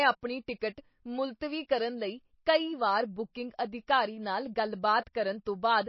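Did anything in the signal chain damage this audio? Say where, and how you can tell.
Yes, throughout the speech the sound is watery and swirling, s sounds chirp metallically, consonant attacks smear, and there is nothing at all above 5.8 kHz. The damage is at the codec stage, most likely MP3 compression at a very low bitrate, somewhere around 25 kbps. Short of bits, the encoder cuts the treble at a fixed point and zeroes the weaker frequency lines, which then flicker on and off from frame to frame and produce the swirl.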